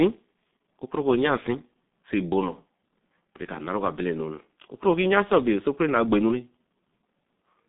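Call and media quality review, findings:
G.723.1 codec throughout: speech muffled and hoarse, with smeared consonants. Nothing above 3.8 kHz; band sits at about 150 Hz to 3.7 kHz. Heavy damage fits a 6.3 kbit/s stream with 30 ms frames and a slowly updated voice model.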